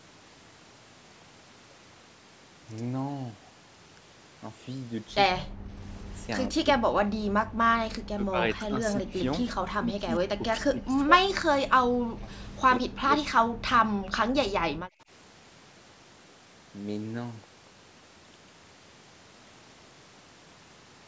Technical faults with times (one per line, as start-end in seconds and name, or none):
5.34-5.73 speech suppressed in double talk
6.48-7.35 speech suppressed in double talk
7.88-9.14 speech suppressed in double talk
9.78-12.29 speech suppressed in double talk
12.77-14.44 speech suppressed in double talk
14.96-15.09 speech suppressed in double talk